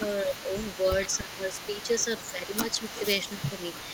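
From the start to the end of the clip, a faint delayed copy of the speech trails the talker by 284 ms, sitting roughly 15 dB below it. This echo leak likely comes from a far-end loudspeaker whose echo canceller let part of the pickup return down the line.

Between 0.24 and 0.53 s, then 1.13 to 1.9 s and 2.31 to 2.95 s, the speech dips in patches: shallowly at first, then by around 10 dB for much of the later spans. This speech suppressed in double talk likely happens when the canceller, facing both sides at once, turns down the talker along with the echo.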